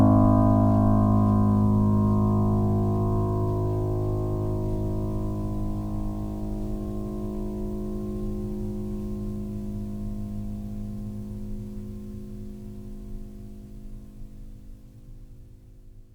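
Nothing in this bit of music calls for a fault report; there's simply nothing technical to point at anywhere in it.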